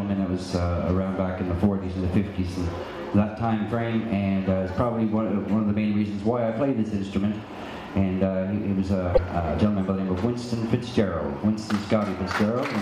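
At 9.11 s the audio breaks into a short burst of damaged data in a compressed stream, lasting about 80 ms until 9.19 s. Part of the encoded stream has been corrupted, so the decoder misreads the frames there and loses its place until it locks onto the next valid frame header. The result is a brief chirp, squawk, click or short hole.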